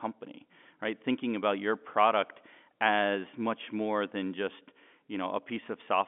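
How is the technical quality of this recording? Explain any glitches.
No glitches can be heard anywhere in this speech recording. It carries the narrow sound of a fixed-line telephone call using G.711 coding, with the band running from roughly 200 Hz up to about 3.5 kHz.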